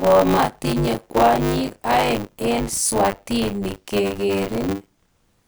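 Throughout the speech, buffer tearing gives a robotic 100 Hz buzz: writer and reader cross mid-period, so roughly a third of each buffer replays audio about 30 ms old.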